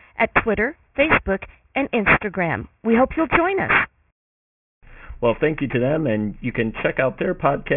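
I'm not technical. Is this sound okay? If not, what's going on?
No. The speech has a fault called aliasing, and it runs through the whole clip. The sound was squeezed into a much lower quality setting, which seems to be a 6 kHz sample rate, without first removing the high parts it could not hold. Those high parts folded back down below 3 kHz as false tones. They are fairly loud. S sounds come out gritty and metallic, and the top end sounds harsh right up to its cut-off.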